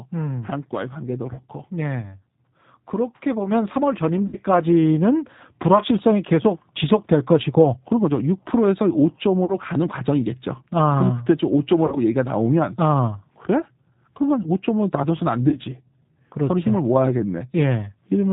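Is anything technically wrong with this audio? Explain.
Yes, a few things. The whole clip runs through the G.729 codec at 8 kbit/s. It rebuilds speech from a vocal tract model plus a few pulses, so the speech sounds rough, synthetic and dull above 4 kHz.

There's VoIP packet loss concealed by the speech codec at 1.33, 4.27, 9.45, 11.86 and 15.49 s. The decoder fills each 30 or 60 ms hole, which fits one or two lost packets, by stretching its last frame into a fading buzzy tone or coloured noise. The speech stays weak for a moment afterward.

At 3.51 s the microphone volume stepped up by about 4 dB. The speech and background jump louder together, as the software boosted the input level in one step.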